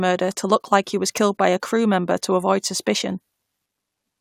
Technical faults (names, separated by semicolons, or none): none